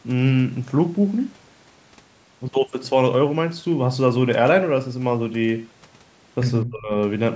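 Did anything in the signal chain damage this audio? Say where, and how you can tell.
Yes, in call processing. From 6.62 to 6.93 s the speech drops by about 30 dB for roughly a third of a second. That is speech suppressed in double talk, likely from the echo canceller ducking the talker while the far side spoke. The waveform shows an abrupt trough, and the spectrogram shows a brief vertical gap.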